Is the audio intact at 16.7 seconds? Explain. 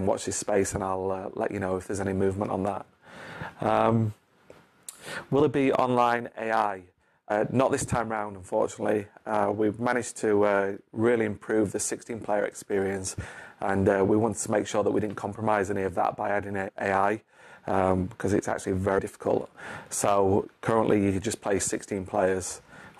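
No. At 16.67 to 16.69 s compressed frames are skipped: about three 23.2 ms frames never play, so roughly 70 ms of audio vanishes. The audio jumps ahead at the join, seen as a waveform discontinuity and a thin vertical mark on a spectrogram.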